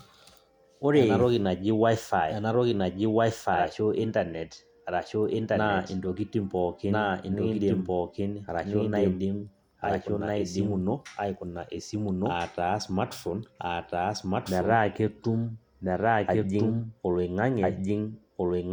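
Throughout the speech, every phrase returns about a second and a half later at roughly the same loudness, crisp and dry with no reverb tail. This is a doubled audio track, likely from the signal being captured twice, once through a slower path trailing behind.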